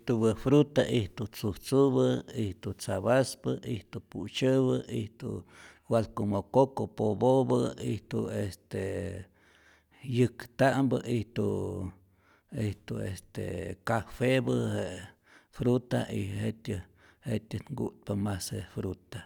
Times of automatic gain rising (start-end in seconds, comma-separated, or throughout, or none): none